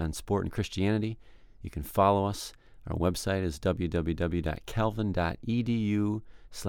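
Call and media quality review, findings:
Nothing to flag on this one; listened through the whole speech recording and there's no audible fault to raise in the call or media path.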